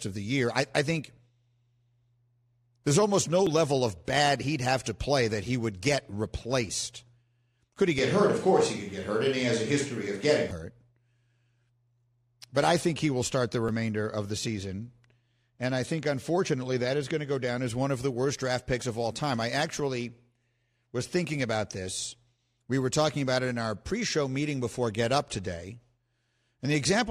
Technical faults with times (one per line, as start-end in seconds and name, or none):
7.98-10.51 switch to a distant microphone